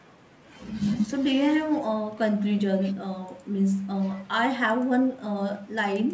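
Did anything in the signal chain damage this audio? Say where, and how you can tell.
No, nothing in the chain harmed this speech; it has simply been through ordinary call processing and a wideband call codec, which is why nothing reaches above about 8 kHz.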